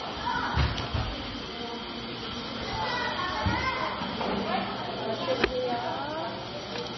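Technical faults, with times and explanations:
Throughout, MP3 compression: the sound is dull and watery, with nothing at all above 5.9 kHz, and the quieter detail swirls and flickers while sharp attacks come out smeared. This is likely heavy MP3 encoding at a very low bitrate, around 23 kbps. Starved of bits, the encoder cut the treble at that fixed point and dropped faint frequency lines, which switched on and off from frame to frame and produced the unsteady texture.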